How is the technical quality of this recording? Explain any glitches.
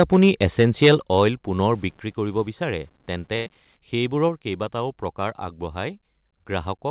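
The recording has four kinds of audible fault, all carried on narrowband call audio with nothing above 4 kHz, which fits G.711 mu-law at 64 kbps.

From 0.00 to 1.23 s, the loudest syllables have a harsh, crackling edge. This is microphone overload. The input is likely set too high, pushing peaks about 7 dB past the converter's limit. Their tops are flattened on around one or two percent of samples.

At 1.02, 2.04 and 4.29 s, the whole sound, background included, drops abruptly by about 6, 4 and 2 dB. This is the microphone volume being stepped down, likely by the call software reacting to a level it judged too hot.

From 1.74 to 3.77 s, quiet passages turn gritty and grainy, and the distortion follows the signal. This points to low bit depth without dither. The signal was likely rounded to about 8 bits, leaving error roughly 35 dB below the signal.

From 3.36 to 3.48 s, there is a burst of packet loss. 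The receiver stretches the last sound for about 97 ms as a fading buzz or hiss. The audio then resumes about 100 ms further on, and that stretch is missing.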